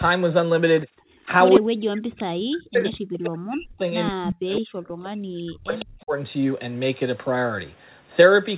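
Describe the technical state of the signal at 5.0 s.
Echo leak runs from 4.88 to 5.06 s. A faint copy of the speech returns about 159 ms behind the original and sits around 25 dB below it. This is likely because the far end plays the call through a loudspeaker and its echo canceller let part of that playback back into its microphone. It is heard as a brief ghost trailing the talker, band-limited like the rest of the call path.

Speech suppressed in double talk follows from 5.1 to 6.14 s. The talker's level sinks by as much as roughly 40 dB across about a second. The echo canceller appears to have been unable to tell the talker's own voice from the loudspeaker echo while both sides overlapped, so it turned everything down together.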